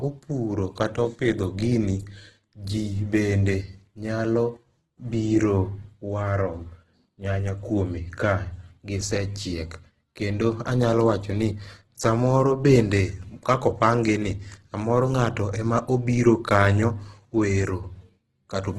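Throughout, the speech carries heavy Opus compression damage, likely from a music-mode encode at around 12 kbps. Bit-starved bands are refilled with folded or noise content, so tones sound rough and grainy. A spectrogram shows nothing above 12.1 kHz and speckled, smeared harmonics below that.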